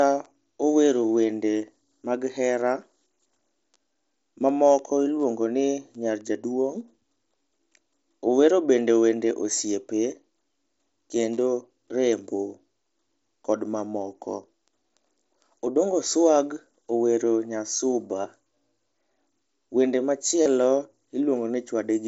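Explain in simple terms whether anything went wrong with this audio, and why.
A few pieces of sound were lost travelling between the Bluetooth headset and the phone, and the phone covered each gap by repeating a fitting bit of the sound just before it. This concealed Bluetooth headset packet loss happens three times: a tiny 7.5 ms gap at 11.36 s, nearly hidden, then a 15 ms gap at 18.22 s and a longer 30 ms gap from 20.43 to 20.46 s, which come through as short buzzy blips.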